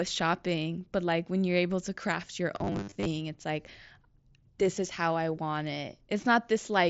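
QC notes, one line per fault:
2.56–3.06 s, robotic sound from repeated short buffers: a rigid 100 Hz metallic buzz, likely from 10 ms chunks repeating over roughly half the audio.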